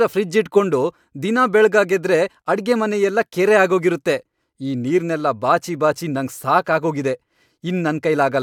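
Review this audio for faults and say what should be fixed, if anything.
There are no faults in this audio, so nothing needs to be fixed.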